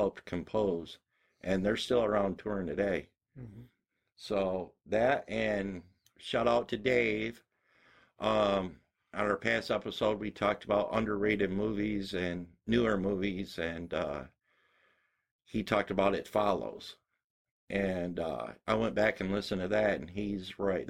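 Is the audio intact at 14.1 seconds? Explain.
No. At 14.1 seconds the speech carries overlap-add ripple, present throughout the clip: frames were rejoined with an overlap that doesn't sum evenly, so level dips about 6 dB roughly 150 times a second, a metallic buzz with extra tones around each note. The waveform envelope shows regular scalloping; a spectrogram shows vertical striping.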